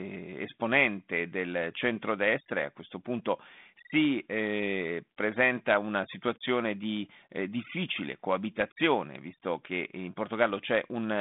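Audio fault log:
No faults are heard in this speech clip. The G.726 ADPCM telephone path keeps the sound within a narrow band that stops near 3.8 kHz, and the light codec damage fits the 32 kbit/s rate used by DECT cordless phones.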